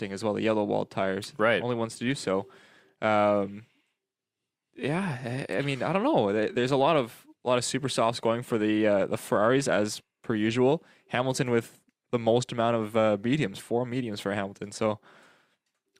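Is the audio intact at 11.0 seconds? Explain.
Yes, at 11.0 seconds the speech plays through intact, with no audible dropout, click, distortion or other fault at that moment.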